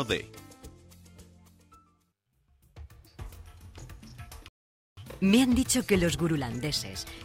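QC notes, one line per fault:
4.48 to 4.97 s, rebuffering stall: the audio drops to dead silence for about half a second, then picks up exactly where it left off. The player ran dry of downloaded data and waited for more, so nothing's missing, just 0.49 s of extra time.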